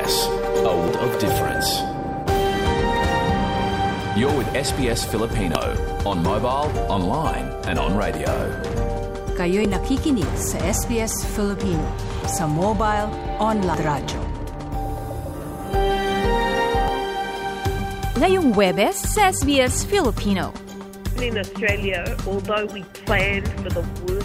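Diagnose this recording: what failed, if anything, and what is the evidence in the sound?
Damaged data in a compressed stream, so the failure is at the codec stage. There are brief glitches at 0.88, 5.55, 9.65, 13.74 and 16.88 s. At each one the decoder hit corrupted frames, misread them, lost sync and glitched while hunting for the next valid frame header.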